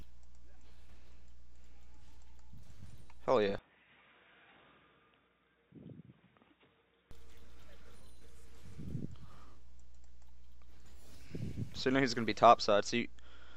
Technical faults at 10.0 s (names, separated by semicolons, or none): none